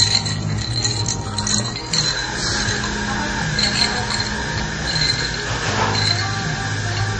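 From start to finish, the sound has the layered smear of transcoding between lossy codecs. Nothing reaches above 9 kHz, so the top end is dull and closed in, and you get two flavours of artefact at once: a watery, swirling texture plus a gritty, pre-echo-ish roughness on transients. That combination is most likely a low-rate Vorbis encode that was later re-encoded to MP3, also at a low rate, each pass piling its own damage onto the last.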